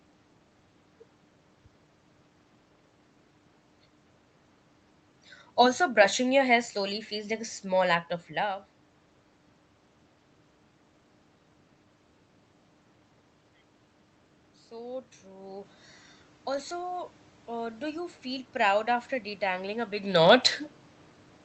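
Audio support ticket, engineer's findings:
Automatic gain rising, 16.46 s to 20.19 s. Level climbs gradually by about 4 dB over nearly 4 s. Probable component: AGC in the capture chain, lifting gain after reading the input as too quiet. Distinguishing sign: room noise swells together with the voice, so not the talker moving. A genuine position change near 20.0 s shifts only the voice level.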